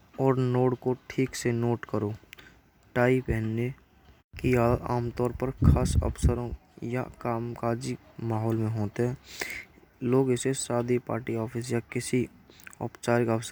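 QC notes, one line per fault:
No faults heard in this clip.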